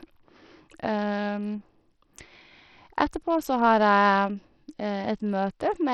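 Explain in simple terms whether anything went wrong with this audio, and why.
Yes: the speech sounds gritty and dull from start to finish, with flickering treble, likely from heavy Bluetooth SBC compression starving the upper frequencies of detail.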